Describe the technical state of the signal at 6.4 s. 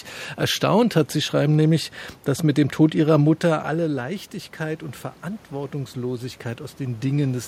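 At 6.4 s the signal is partway through automatic gain rising, which runs from 3.73 to 7.43 s. The input level fell by about 11 dB when the talker moved back from the microphone, around 3 s, so the gain control slowly adds about 5 dB to compensate. Unlike a talker leaning closer, the room noise swells along with the voice, rising gradually over several seconds rather than changing with position.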